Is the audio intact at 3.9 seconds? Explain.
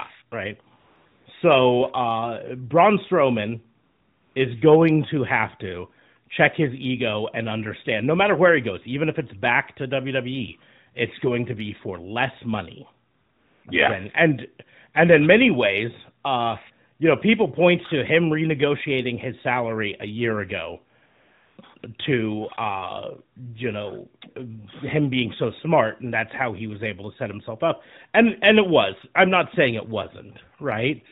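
No. At 3.9 seconds the audio falls inside a stretch of AMR comfort noise, from 3.84 to 4.36 s. The phone treated this half-second as silence and sent no speech frames. The receiver filled the gap with a smooth synthetic hiss in place of the real background.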